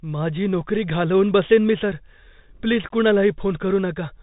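From start to finish the speech sounds boxed-in and dull, with nothing above 4 kHz, a grainy hiss beneath it, and scratchy s sounds. That is the Bluetooth CVSD headset codec, which fits a 64 kbps stream. It sends one up-or-down bit per sample, and its adapting step cannot keep pace with loud high sounds, which distort.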